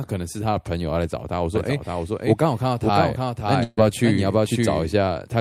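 A speech recording carrying a doubled audio track from 1.55 to 4.93 s: a full-band copy trails by roughly half a second, a few decibels below the original, likely from a second, slower capture path. Unlike an echo or room reverb, the copy has no decay or colouring and starts and stops abruptly. A burst of packet loss falls at 3.63 to 3.79 s. About 136 ms is filled by the last sound held and fading, with a brief silence of about 10 ms, and roughly 140 ms of material is skipped. That concealed fill and forward jump, rather than a plain silent gap, separate it from a simple dropout.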